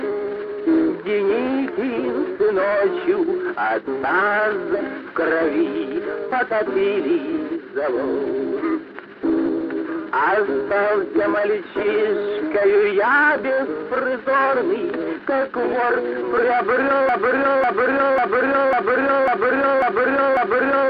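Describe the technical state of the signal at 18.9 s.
At 18.9 s you're in the middle of a broken-record loop that starts at 17.09 s and runs to the end. A chunk of about 547 ms repeats back to back, seven times in all. It's likely a stalled player or stream resending its last buffer, so whatever audio belonged there is gone.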